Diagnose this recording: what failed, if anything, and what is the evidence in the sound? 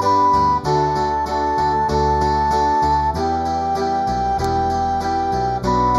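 One channel arrives about a fifth of a millisecond late before the two are summed to mono, producing channel delay (comb filtering) throughout. Content common to both channels cancels at evenly spaced frequencies, the first notch falling around 3 kHz, which leaves the sound hollow.

At 4.44 s a sharp snap sits on top of the audio, the signature of an electrical switching spike. It likely came from a nearby switch, motor or static discharge arcing and being picked up in the analogue wiring.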